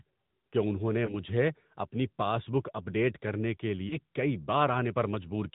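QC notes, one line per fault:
throughout: AMR narrowband mobile codec. The speech passes through a narrowband mobile coder that rebuilds it from a vocal tract model and sparse pulses, with nothing above 4 kHz. The result is a muffled, buzzy, plainly synthetic tone, which fits the 10.2 kbps AMR-NB mode.
1.06 to 1.15 s and 3.88 to 3.96 s: lost AMR speech frames. After "کہ انہوں نے" and after "اپ ڈیٹ کرنے کے", the decoder had no valid frame and refilled the gap from the last good pitch and vocal tract settings at reduced gain. Each gap is a brief dip or warble that fits a single lost 20 ms frame, and the speech returns weak or rough for a moment.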